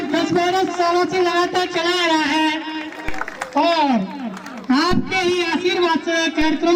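DC steps at 3.09 s, 4.91 s and 6.42 s: the waveform's zero line suddenly shifts by about -15 dBFS (about -16 dBFS at the last), then drains away through a 2 Hz high-pass, so each jump lands as a brief low thump under the unchanged sound.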